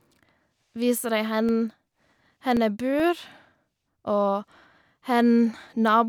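A disc blemish defeats error correction once per revolution, so from 1.06 to 3.21 s CD scratch ticks recur, eleven tiny clicks about five per second, the longest lasting about 3 milliseconds.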